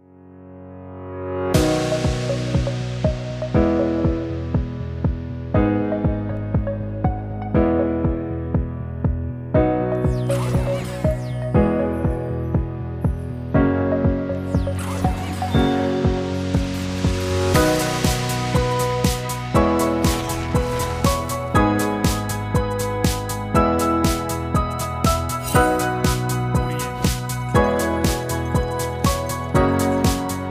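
A single DC step occurs at 6.37 s. The zero line of the waveform jumps abruptly, by about -34 dBFS. That sudden shift is heard as a brief low thump or click. The audio itself carries on unchanged through it. The offset does not hold. It drains away, which fits a high-pass of around 5 Hz in the chain letting the step decay. The cause is a DC offset switched into the signal path, such as a converter recalibrating or an offset input being connected.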